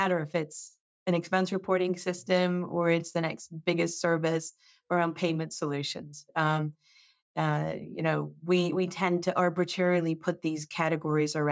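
Nothing technically wrong is audible in this speech recording, which carries the ordinary signature of call microphone processing, with the lowest bass trimmed and no content above about 8 kHz.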